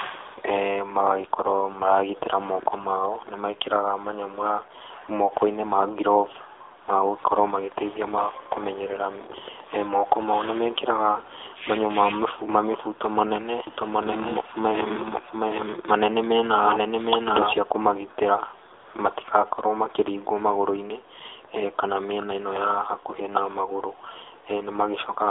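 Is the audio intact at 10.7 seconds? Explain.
No, 10.7 seconds falls inside the AMR narrowband mobile codec damage that runs through the whole clip. The speech has been squeezed through a phone-style channel, roughly 300 Hz to 3.6 kHz, and rebuilt from a vocal-tract model fed by sparse pulses in short frames. At this low a rate, which fits about 7.4 kbps, it's plainly audible: thin, boxy, with a buzzy, synthetic edge to the speech.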